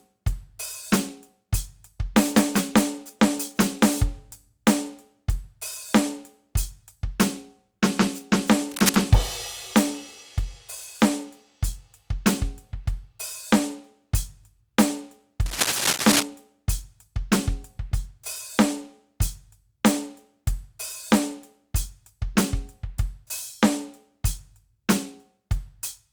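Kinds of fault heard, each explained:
Cable scratch noise: 8.71–9.06 s and 15.46–16.26 s, rough crackling bursts nearly as loud as the music, likely a worn connector whose contact resistance jumps when moved.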